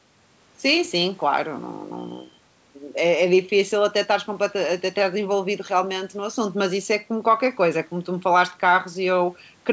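Listening closely to this speech recording, nothing stood out as a technical problem at any point.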